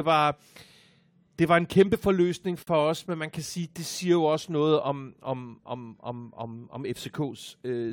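At 2.63 s the speech drops into a brief hole of silence lasting about 47 ms, ending at 2.67 s. Its edges are smeared, then the audio picks up exactly where it left off. This is a gap at a join of encoded pieces: the clip was encoded in separate sections and joined untrimmed, so the start-up silence and end-frame padding from each encoder run remain.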